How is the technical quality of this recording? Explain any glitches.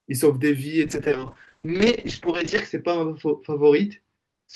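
The quality falls off partway through. A call bitrate drop starts at 0.84 s and lasts to the end of the speech. The connection's bandwidth estimate fell. The encoder was pushed from 32 kbps down to 7 kbps, and it stays at that floor for about 1.8 s. With so few bits, the coding gets coarse. The audio band also shrinks from 20 kHz to 8 kHz. The speech turns muffled, with a rough, watery texture.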